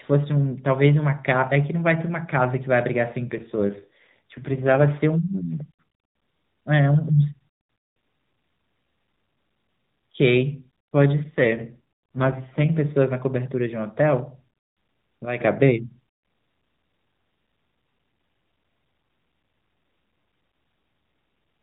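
From 3.26 to 4.86 s, and again from 11.24 to 12.70 s, there is an AMR rate drop. The voice turns rougher and more synthetic, which fits the codec falling from 12.2 to 5.9 kbps. The band stays narrow and unbroken. Each time, the voice recovers when the rate climbs back.

From 15.25 to 15.40 s, there is a sudden gain jump. The level falls by about 9 dB in a single step, and the speech and background noise drop together. This is likely a gain change applied without a ramp.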